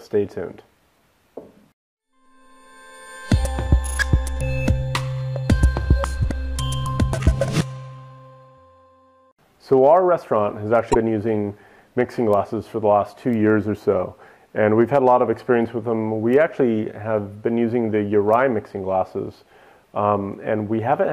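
At 10.91 to 10.96 s there is a short burst of damaged data in the compressed stream. Some bytes arrived wrong. The decoder misread those frames, lost sync and searched for the next valid header. The result is a brief glitch, about 50 ms long.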